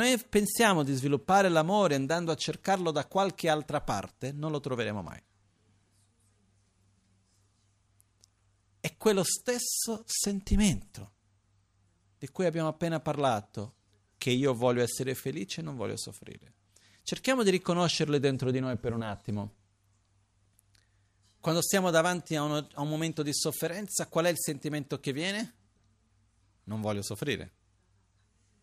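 No technical faults are audible.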